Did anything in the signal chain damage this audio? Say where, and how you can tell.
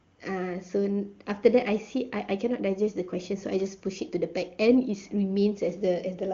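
No, nothing in the chain damaged this speech.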